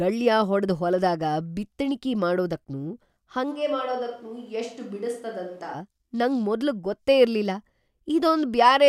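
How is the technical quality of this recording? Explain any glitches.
The speech has one clear fault. From 3.53 to 5.73 s there is a likely switch to a distant microphone: the voice abruptly turns roomy and hollow, loses bass, drops roughly 10 dB, and background noise sits only around 35 dB below speech, before snapping back to the close sound.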